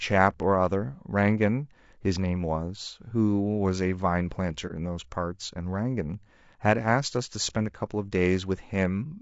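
Throughout the clip the speech has a rough, grainy texture, with noise filling the gaps between the pitch harmonics and a thin, somewhat synthetic upper band. This is plainly audible codec damage, likely from low-delay AAC compression of the AAC-ELD kind used in video calls. Its short frames separate voice harmonics poorly, so at a low bitrate, around 32 kbps judging by the degree of damage, too few bits remain to code the spectrum cleanly.

From 4.67 to 4.72 s there is a brief dip: the sound fades down and back up again. This is AAC frame loss with muting. Roughly 30 ms of coded audio went missing, which fits a single lost frame, and the decoder replaced its spectrum with silence. The overlapping transform windows taper the signal on either side of the gap, which is why the dip has rounded edges.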